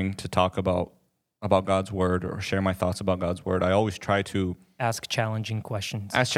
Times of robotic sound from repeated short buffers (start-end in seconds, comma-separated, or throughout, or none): none